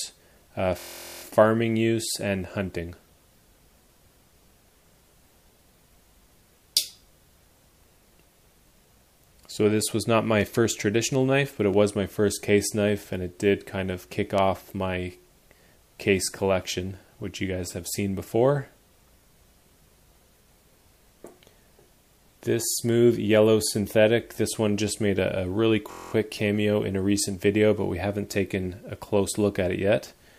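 At 0.79 to 1.23 s and 25.91 to 26.12 s, a system hang loop repeats one 23.2 ms slice. The result is a steady 43 Hz buzz, which fits a 1024-sample buffer.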